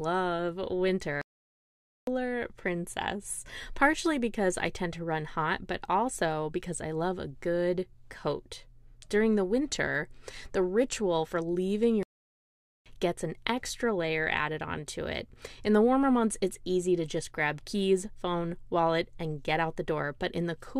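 A likely playback stall, with the player starved of data or its thread blocked, cuts this speech clip to silence twice: from 1.21 to 2.07 s, resuming on "princess partially because I", and from 12.03 to 12.86 s, breaking "the ritual for leaving" from "gets an extra layer", each gap about 0.83 to 0.86 s.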